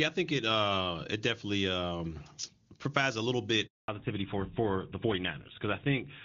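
At 3.66 s, just after "um provides a little", the speech cuts out. This is a handover gap. The call is being passed from one network to another, and no speech frames get through during the switch. The voice fades within a few tens of milliseconds. Then there is dead silence for 220 ms, until 3.88 s. Whatever was said in that stretch is simply gone. It is not muffled or garbled, just missing.

From 3.88 s to the end, the sound changes character. This is a fallback to narrowband. Before the gap, the speech has the fuller, airy top of HD Voice, which fits AMR-WB at its highest rate, around 23.85 kbit/s. After the gap, nothing remains above 4 kHz. The sibilants lose their crispness. The voice sounds duller and rougher. That band limit and texture point to an older codec such as GSM full rate.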